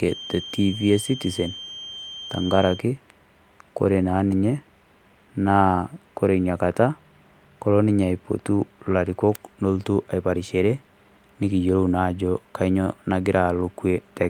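From 0.0 to 2.86 s, the loop between loudspeaker and microphone was likely sitting right at the edge of feedback, with enough gain to sustain one frequency but not enough to let it build. The result is a feedback whistle: a thin, steady tone at 3.2 kHz running underneath the speech, roughly 15 dB below it, swelling and fading slowly in level before it disappears at 2.86 s.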